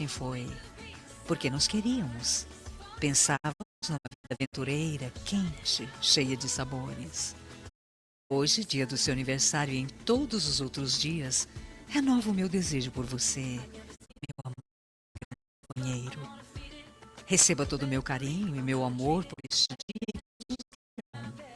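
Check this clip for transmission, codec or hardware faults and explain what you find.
Four digital broadcast dropouts mute the sound, at 3.36–4.55 s, 7.68–8.32 s, 13.95–15.78 s and 19.32–21.16 s. The receiver silences output whenever frames arrive corrupt, so each gap falls in a short 20 ms fade, and three of them leave scattered holes, the longest about 0.54 s, before the sound resumes further on. Unlike a loose cable or analogue fade, there is no crackle, hiss or gradual weakening; the audio simply stops cleanly and the missing material never returns.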